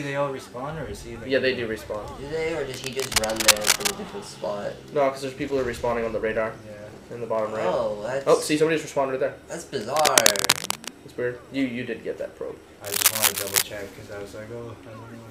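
A worn cable or connector being moved, likely changing its contact resistance rapidly, adds cable scratch noise at 2.74–3.95 s, 9.74–10.89 s and 12.84–13.64 s. Each burst is dense, uneven scratching and rustling, somewhat louder than the sound itself.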